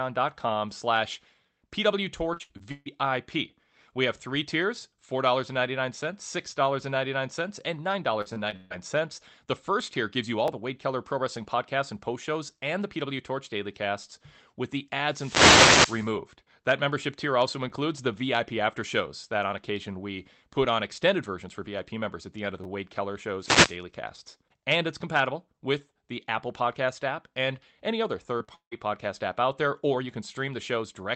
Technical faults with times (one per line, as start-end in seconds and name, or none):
2.33-2.88 repeated packet loss (robotic sound)
8.22-8.72 repeated packet loss (robotic sound)
10.48 repeated buffer
15.06-16.13 wireless microphone noise hit
17.70 repeated buffer
22.64 repeated buffer
23.40-23.77 wireless microphone noise hit
28.38-28.49 short concealed packet loss
28.55-28.73 long network dropout